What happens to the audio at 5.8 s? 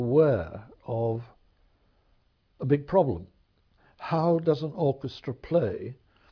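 Nothing goes wrong at 5.8 s; the audio plays through that moment intact.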